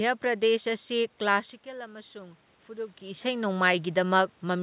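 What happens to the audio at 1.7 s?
Automatic gain rising, from 1.63 s to 3.56 s: after the input level falls by about 15 dB, the gain control judges it too quiet and slowly lifts its gain by about 4 dB, so the voice and the room noise swell up together over nearly two seconds.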